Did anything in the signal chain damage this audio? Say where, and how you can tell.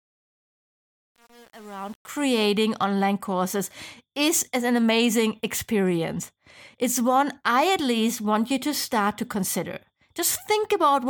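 Yes. Across the fade-in from 0.0 to 2.23 s, just before "online courses is an", there is truncation distortion on a fade, from a gain or sample-format conversion stage that dropped bits without dither. The quiet start sounds gritty, with worst resolution through 2.22 s, which fits roughly 7-bit steps. On the waveform the low-level portion shows blocky staircase shapes. The spectrogram shows broadband hash instead of a clean rising envelope as the fade comes up.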